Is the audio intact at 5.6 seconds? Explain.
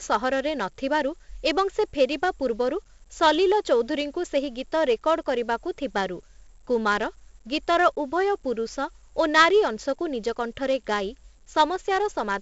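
No. At 5.6 seconds, as across the whole speech clip, a gritty hiss rides on every louder syllable, sharp attacks distort, and nothing sounds above 7.7 kHz. This is heavy 4-bit ADPCM compression: each sample is coded as a coarse step from a prediction, consistent with a 64 kbps stream.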